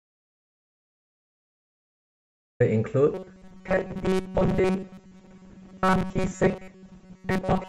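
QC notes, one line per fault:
0.00–2.60 s, audio dropout to silence: the clip opens already dead, with a flat waveform and a blank spectrogram carrying no room tone. The likely cause is lost input written as silence.
3.14–7.68 s, robotic sound from repeated short buffers: a rigid metallic buzz at 188 Hz runs to the end. It shows as evenly spaced harmonic stripes, likely from most of the sound being about 5 ms chunks replayed.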